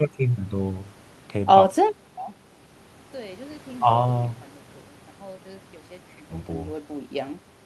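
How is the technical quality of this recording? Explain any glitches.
No technical glitches can be heard; the signal holds together without dropouts, clicks, distortion or other faults.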